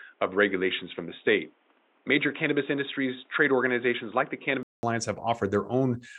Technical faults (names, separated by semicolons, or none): input switched to a poorer device